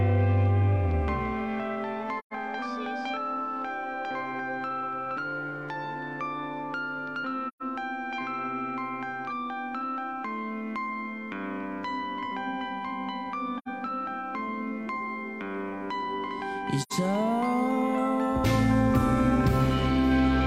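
At 2.19, 7.48, 13.58 and 16.82 s the sound falls into short soft-edged holes, an AAC frame loss with muting. The decoder zeroed the missing spectrum, for about 128 ms at the first two and 85 ms at the last two, which fits three and then two lost frames. The waveform tapers smoothly to flat and back, and a spectrogram shows blank full-band gaps.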